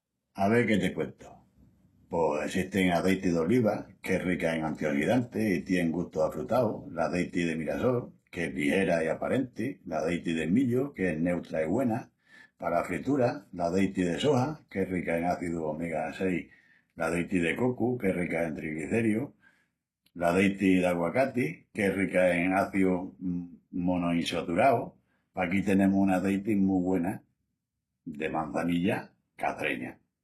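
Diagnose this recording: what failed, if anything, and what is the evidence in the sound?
The codec stage failed, most likely from HE-AAC compression, throughout the speech. The treble sounds bright but rebuilt, with gritty, lispy s sounds and nothing above 12.3 kHz. Unlike a plain low-pass, the top is copied from lower bands, at a low bitrate of about 16 kbps.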